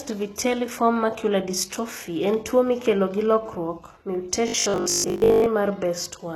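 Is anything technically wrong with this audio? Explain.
Yes, there are two faults. HE-AAC compression damage runs throughout: the treble is plainly gritty and lispy. This is likely a low-bitrate HE-AAC encode, something near 16 kbps. It stores only the lower spectrum properly and fakes the highs by copying lower bands upward under a coarse envelope. The rebuilt harmonics don't line up with the real ones, so s sounds come out metallic rather than crisp.

Robotic sound from repeated short buffers appears from 4.48 to 5.46 s. The speech collapses into a stiff, metallic buzz at 50 Hz that still roughly tracks the syllables. The likely cause is audio arriving too slowly, with playback filling the gaps by looping the last stretch it had. A 50 Hz buzz fits a 20 ms loop. Most of that second consists of repeated material, and the real audio in between is skipped.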